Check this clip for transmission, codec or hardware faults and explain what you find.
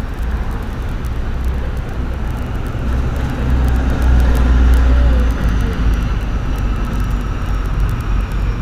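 No transmission, codec or hardware faults can be heard in this recording of sounds. There is nothing in the audio that needs explaining.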